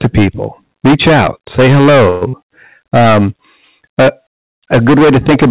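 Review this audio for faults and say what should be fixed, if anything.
Hard clipping runs through the whole clip. The level is overdriven by about 17 dB, so roughly a fifth of the samples hit the converter's limit and are cut flat. This produces a constant harsh fuzz on every loud syllable, with added harmonics reaching up to the 4 kHz band limit of the narrowband call path. To prevent it, reduce the input gain or limit the signal before the first converter or fixed-point stage, so peaks stay below full scale.

A call audio freeze occurs from 2.10 to 2.23 s, right after "reach out say". For 112 ms the receiver keeps extending the last sound as a fading buzz, then resumes where it stopped. Nothing is lost, but playback now runs 112 ms later. The likely cause is delayed packets emptying the jitter buffer. To prevent it, fix the network delay spikes or allow the jitter buffer more headroom.

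Short concealed packet loss follows from 2.29 to 2.35 s. 40 ms of audio never arrived, and the receiver filled the hole by continuing the preceding sound, then blended back in. The result is a brief smear, and whatever was in that 40 ms is gone. To prevent it, reduce packet loss on the link, or enable forward error correction or redundancy for the stream.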